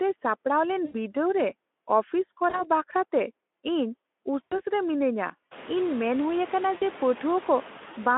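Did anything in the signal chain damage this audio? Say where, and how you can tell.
Yes. Noise suppressor artifacts come from the call-processing stage. Between phrases the background drops by about 15 dB, then swells back under the speech. After the room noise rises around 5.5 s, the suppressor has stronger noise to cut. The suppressor is gating bands frame by frame.

VoIP packet loss concealed by the speech codec sits at the network stage. Gaps land at 0.85 to 0.95 s, 2.49 to 2.70 s, 4.44 to 4.60 s and 6.77 to 6.84 s. Each one is filled by sound the decoder extrapolates, fading as it goes. The Speex decoder is extrapolating over 40 to 80 ms of missing audio.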